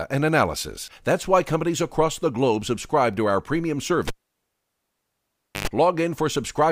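At 4.08 s a live cable is pulled and plugged in: a pop, 1.55 s of flat waveform, 0.1 s of 50 Hz buzz as harmonic stripes, a pop at 5.68 s.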